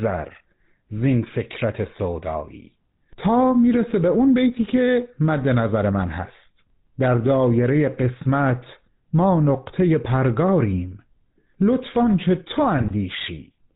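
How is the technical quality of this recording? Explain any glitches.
The recording is poor: the whole clip carries the plainly audible coloration of an early mobile-phone codec, and near the end a brief burst of decoding errors breaks up the speech.

The GSM full-rate codec coding runs from start to finish. The codec rebuilds speech from a vocal-tract filter driven by a sparse, regularly spaced pulse excitation, and it removes everything above 4 kHz. That gives the speech a dull, band-limited quality with a buzzy, gravelly roughness, which fits the original 13 kbps full-rate GSM coder. What sets it apart from ordinary telephone band-limiting is that grainy, rasping texture. A clean narrowband line sounds muffled but smooth.

The GSM bit errors occur from 12.77 to 12.92 s. Corrupted bits reached the decoder and scrambled the filter, pitch or gain parameters, so for a few frames it rebuilt the wrong spectrum and level. 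That produces a short squawking, gargling break with sudden pops, which fits roughly eight damaged frames. It differs from packet loss: the sound doesn't drop out or smoothly repeat but turns into distorted, wrongly shaped noise.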